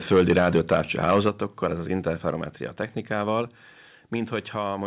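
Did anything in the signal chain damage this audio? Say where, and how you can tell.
Yes. The problem starts at the converter. From 0.11 to 1.29 s the loudest peaks are flattened where they hit the converter's limit, about 5 dB beyond what the converter could hold. That points to the microphone input volume being set too high, a likely microphone overload. A few percent of the waveform is squared off, and this puts a harsh, crackling edge on the strongest syllables until just before "ez az".

The second fault is in call processing, where automatic gain control is likely responsible for the microphone volume stepping down. The level of the voice and the background drops suddenly at five points: 0.14 s by about 2 dB, 1.29 s by about 5 dB, 2.31 s (just after "ez az") by about 3 dB, 3.42 s by about 3 dB, and 4.77 s by about 2 dB. The first two fall inside or at the end of the clipped stretch. 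The call path itself shows the expected narrowband limit, with nothing above 4 kHz, which fits G.711 A-law.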